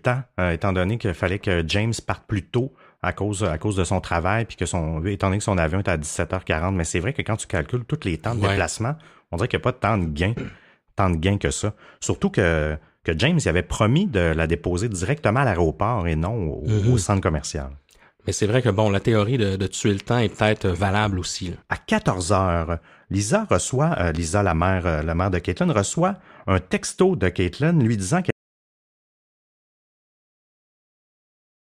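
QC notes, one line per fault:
28.31 s to end: audio dropout to silence. Just after "lui disant" the speech cuts off mid-flow and the last 3.3 seconds are dead silence, with no room tone or hiss underneath, and the sound never returns before the clip ends. That silent gap points to the input signal being lost while the recorder kept writing, likely through a disconnected device, failed link or accidental mute, so whatever followed is missing.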